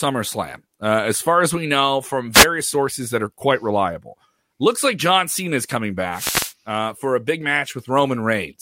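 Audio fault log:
2.32 to 2.46 s, wireless microphone noise hit. A brief swish of static cuts in after "as we know from" and clears before "sources that are quite". The radio link from the microphone fades for about 0.14 s as reflected signals cancel, so receiver hiss rises over the speech.
6.12 to 6.53 s, wireless microphone noise hit. A longer burst, about 0.41 s, follows "is coming" and ends before "uh for a big". The fade lets receiver noise rise over the speech.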